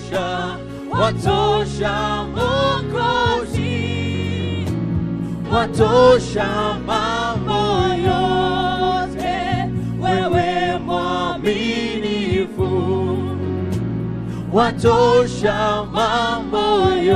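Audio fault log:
No fault found in the audio.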